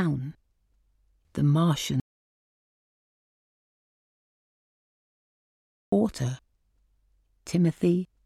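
The input feed to the recorder was likely interrupted, perhaps by a disconnected device or a failed link, while the recorder kept writing silence. The result is an audio dropout to silence from 2.00 s to 5.92 s. The sound cuts off abruptly mid-flow and returns just as suddenly, and the 3.9 s gap between is total silence with no room tone. Whatever occurred during that stretch is missing from the recording.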